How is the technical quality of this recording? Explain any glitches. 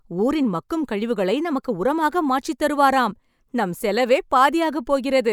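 No glitches or technical faults are audible anywhere in this speech recording.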